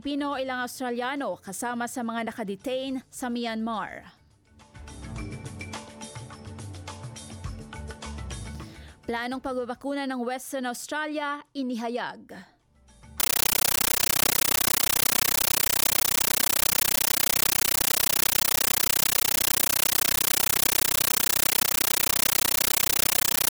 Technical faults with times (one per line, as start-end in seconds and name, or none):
13.20-23.51 compressed stream played as audio